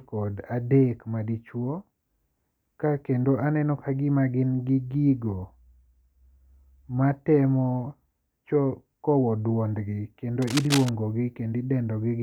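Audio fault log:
10.42–10.89 s, cable scratch noise: dense, uneven scratching bursts sit just below the speech level, likely from a worn cable or connector shifting contact.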